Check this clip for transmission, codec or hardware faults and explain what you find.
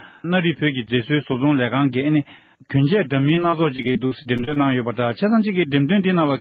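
Two transmission faults turn up near the end, both on a call path whose top end stops around 12 kHz, which fits an Opus connection.

From 3.21 to 4.58 s there's repeated packet loss with a robotic sound. About a dozen short holes open in quick succession, the longest around 38 ms, and each one gets patched by stretching out the previous sound. Nearly a fifth of that stretch is filler, so it comes across choppy and mechanical.

Right on the tail of that, from 4.50 to 4.77 s, there's a jitter buffer slow-down. The receiver repeated small slices of audio to rebuild its reserve, adding about 36 ms, so playback drops to roughly 89% speed with the pitch unchanged and sounds drawn out.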